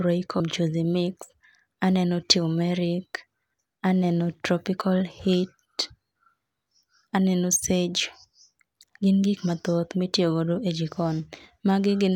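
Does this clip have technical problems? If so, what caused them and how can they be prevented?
Yes. At about 0.40 s the speech jumps ahead, with compressed frames skipped. Frames here look like 32 ms long, and about two go missing, so roughly 70 ms of audio never plays. Either those frames are absent from the file or the decoder rejected them as corrupt. Verifying file integrity after encoding and transfer, and using error-protected transport, prevents this.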